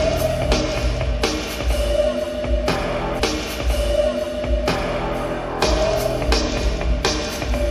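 At 3.18 s the audio jumps back with a small blip and plays roughly the preceding two seconds over again, running to 5.18 s before carrying on, so the clip gains about 2.0 s of duplicated material. This is a stream segment repeated: the player fetched or queued the same chunk of the stream twice, so it rendered that segment a second time, and the seam where playback resets is what produces the brief click.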